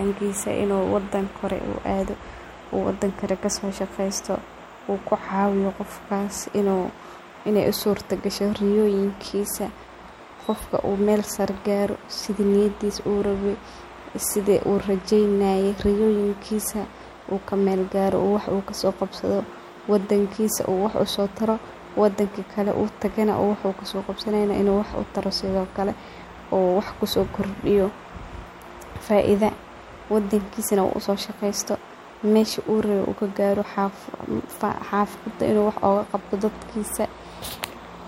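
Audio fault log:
No faults can be heard anywhere in this speech recording.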